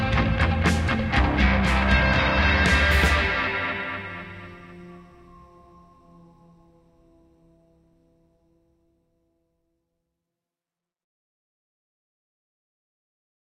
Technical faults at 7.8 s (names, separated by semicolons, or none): none